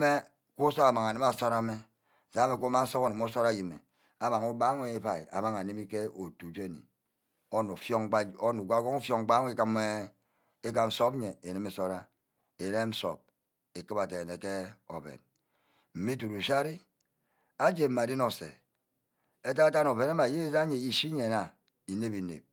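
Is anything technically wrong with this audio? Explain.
No, nothing technically wrong can be heard anywhere in this speech recording.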